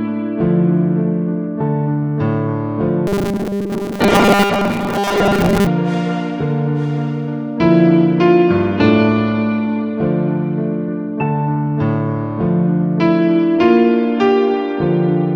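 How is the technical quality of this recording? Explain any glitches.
The recording has one clear glitch: a robotic sound from repeated short buffers, from 3.07 to 5.67 s. Through that stretch the sound turns into a rigid, metallic buzz fixed at 200 Hz, which fits a 5 ms chunk being played over and over. The likely cause is new audio arriving too slowly, so playback keeps repeating the last short piece while most of the real material in that span is skipped.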